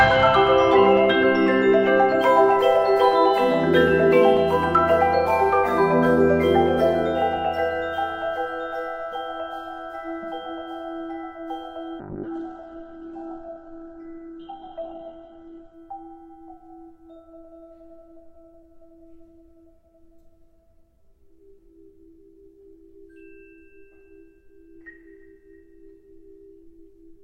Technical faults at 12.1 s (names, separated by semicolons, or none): call bitrate drop